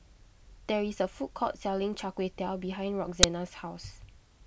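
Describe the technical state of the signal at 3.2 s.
At 3.23 s there is an uninitialised buffer fault. For about 8 ms, the playback path output a block before any audio had been written into it. Stale memory was read as if it were samples. The result is a brief, loud crack cutting into the speech. It has no relation to the surrounding sound. The 8 ms length fits a 128-sample block.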